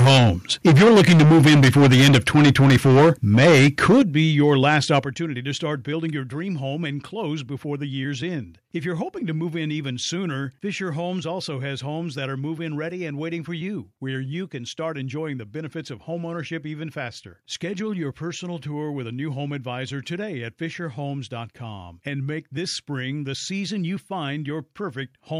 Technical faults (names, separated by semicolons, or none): microphone overload; microphone volume stepped down